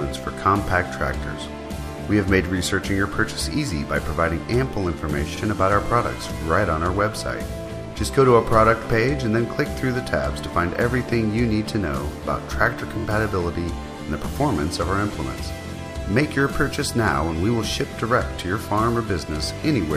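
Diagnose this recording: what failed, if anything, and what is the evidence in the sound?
Repeated frames at the codec or storage stage: a 46.4 ms chunk replays once at 5.36 s, and a 23.2 ms chunk (fits 1024-sample frames at 44.1 kHz) plays three times at 12.99 s, giving brief stutters.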